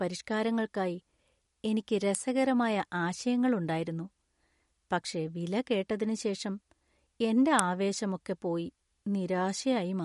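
Throughout, the speech sounds watery and swirly with a hard treble ceiling near 11.2 kHz, likely from MP3 compression at a low bitrate, around 48 kbps. At 2.15 s and again at 7.59 s a sharp snap sits on top of the sound, likely an electrical switching spike picked up by the line.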